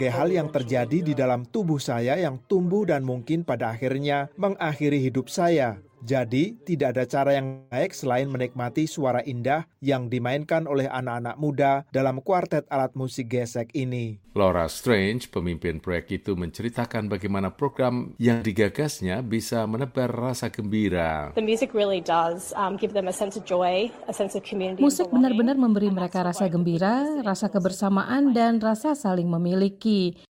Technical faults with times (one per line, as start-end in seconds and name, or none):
7.45-7.73 long network dropout
18.33-18.43 burst of packet loss